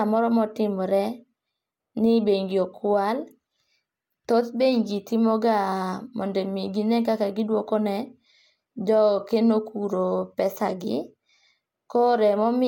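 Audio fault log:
No fault to log for this audio.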